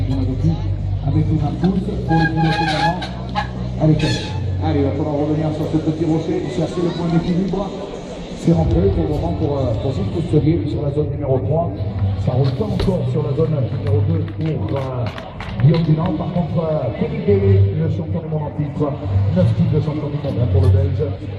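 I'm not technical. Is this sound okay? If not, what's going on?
Yes, nothing wrong can be heard in this recording, so no fix is needed.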